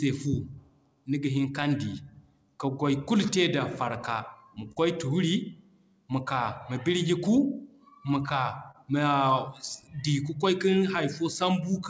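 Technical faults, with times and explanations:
Throughout, clock drift between sender and receiver: the sending device's audio clock runs about 3% slow against the receiver's, so the jitter buffer keeps draining. The receiver must keep padding the stream to stay in step, leaving small timing hiccups spread unevenly across the speech.
0.50 to 11.71 s, repeated timing corrections: to cover the slow sender, the receiver repeatedly stretches short pieces, playing this stretch at about 98% speed and adding roughly a fifth of a second overall. The edits go one way but are unevenly spaced.
4.72 to 4.79 s and 8.71 to 8.77 s, short stall from a late packet: a packet arrived late and the buffer ran dry, so the receiver held the last sound for 42 ms and then 29 ms until it came. Nothing is lost, but the sound briefly drags with a slight buzz or dip.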